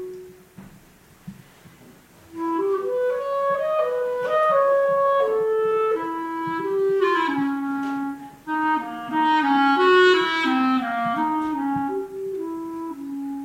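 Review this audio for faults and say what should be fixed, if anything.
No technical faults can be heard anywhere in the audio. Nothing needs to be fixed.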